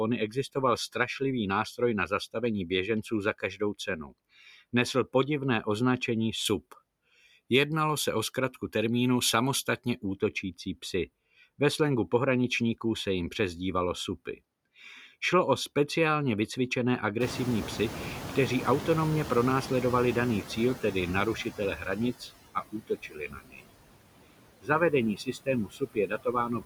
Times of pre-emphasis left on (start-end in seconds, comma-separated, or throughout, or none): 6.45-10.14